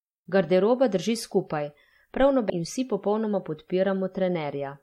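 At 2.49 s the speech jumps abruptly forward with a brief blip, losing continuity; the likely cause is a stream segment skipped after failing to load.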